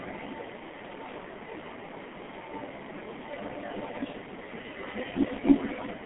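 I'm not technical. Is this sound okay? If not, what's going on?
No. From start to finish the speech sounds muffled and hoarse, as if heard down an old phone line, and consonants smear together. This comes from the G.723.1 codec, an early internet-phone format that squeezes the voice very hard. It keeps only a narrow band, roughly 150 Hz to 3.5 kHz, and drops everything above about 3.8 kHz, which takes away the crispness.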